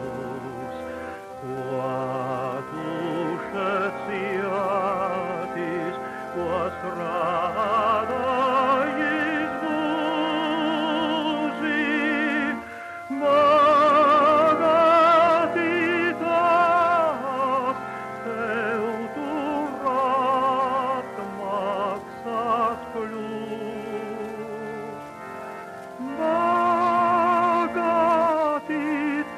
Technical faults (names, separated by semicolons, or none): none